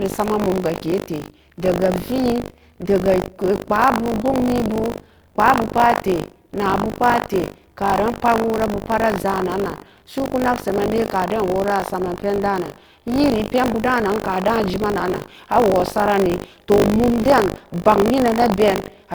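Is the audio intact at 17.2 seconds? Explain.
No, buffer tearing runs through the whole clip: writer and reader overlap, so about a tenth of each buffer replays older speech, giving a 50 Hz robotic buzz.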